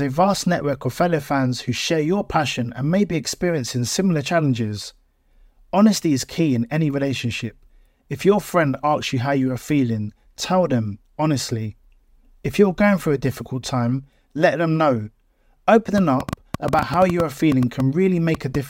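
From 15.98 to 18.56 s, a train of clicks, about twenty uneven pops at roughly 6.6 per second, ticks well above the speech, likely from interference or a faulty connection.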